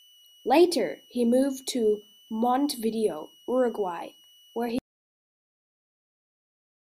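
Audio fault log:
Throughout: switching supply whistle. A thin, high tone sits under the speech for the whole clip, near 3 kHz. Its pitch wanders slightly, between 2.91 and 2.97 kHz. It stays roughly 30 dB below the speech. This points to a power supply running in an audible burst mode.
4.79 s to end: audio dropout to silence. The speech cuts off abruptly and never returns. The gap is silent, with no room tone. The input was likely lost while recording continued, so only silence was written.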